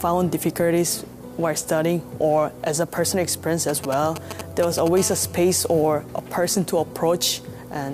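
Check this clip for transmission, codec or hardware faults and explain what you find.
Two interference faults appear, both from a nearby 2G handset.

GSM signalling bursts, 3.69 to 4.88 s: a phone handling signalling traffic transmits short groups of radio bursts that the audio circuit rectifies. These are heard as a galloping dit-dit-dit of brief 217 Hz buzzes, roughly 10 dB below the signal.

GSM phone buzz, 4.97 to 5.83 s: the handset is now in a call, pulsing its transmitter 217 times a second without pause. The rectified pulses produce a hard, raspy, harmonic-rich 217 Hz buzz that ignores the programme material, sitting about 18 dB below the signal.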